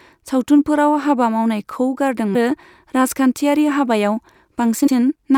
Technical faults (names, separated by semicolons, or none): damaged data in a compressed stream